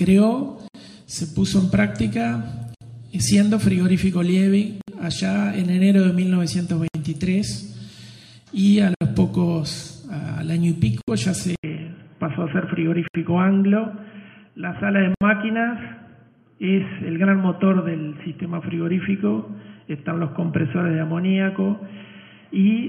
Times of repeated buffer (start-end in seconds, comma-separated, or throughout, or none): none